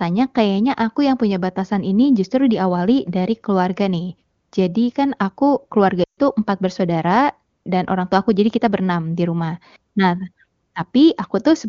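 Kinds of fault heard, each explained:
Lost AMR speech frames: at 6.03 to 6.19 s, right after "kan aku keluarga", the speech drops to near silence within two frames and stays out for about 140 ms, a gap that fits a run of seven 20 ms frames. Corrupted frames over the radio link forced the decoder to keep repeating the last good pitch and vocal tract settings at shrinking gain, fading quickly as wideband concealment does, before the voice returns weak or rough for a moment.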